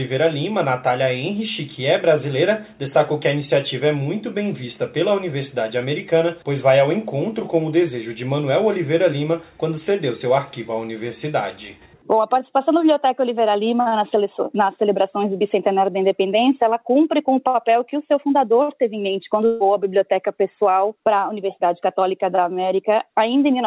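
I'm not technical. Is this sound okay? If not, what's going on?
No. At 19.46 s there is a burst of packet loss lasting until about 19.63 s. A short run of the audio never arrived in time, so the receiving end filled roughly 140 ms by stretching out the last sound it had and letting it fade, which comes across as a brief held buzz or hiss. When the sound picks up again, about 150 ms of the original is simply gone. The call line it travelled over also carries nothing above 4 kHz, giving a muffled, telephone-like tone.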